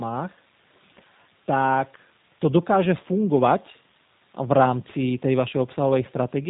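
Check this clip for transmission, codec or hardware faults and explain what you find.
One codec fault runs through the whole speech clip. G.729 coding is present throughout: nothing passes above 3.8 kHz, and the speech sounds plainly rough and synthetic, consistent with an 8 kbit/s coder rebuilding each 10 ms frame from a vocal tract filter, a pitch predictor and a few pulses rather than the actual waveform.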